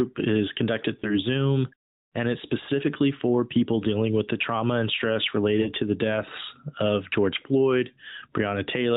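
Speech frames failed their checks and were concealed by the AMR decoder, so lost AMR speech frames appear: at 1.00 to 1.15 s, after "is conducted", one frame gives a short warbling dip; at 5.62 to 5.69 s, between "the trauma and stress" and "to the deaths of", two frames smear and briefly fade. The narrowband speech sounds lightly coded, consistent with AMR-NB at 12.2 kbps.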